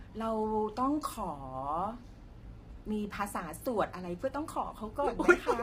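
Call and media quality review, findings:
Rough, grainy texture across the whole speech clip, 0 s to end. Noise fill between pitch harmonics, top band dull and partly synthetic. Heavy damage. Likely low-delay AAC compression (AAC-ELD), sound consistent with about 24 kbps. Short frames blur harmonic structure, the low bitrate starves the bit budget, forcing noise substitution and a reconstructed upper band.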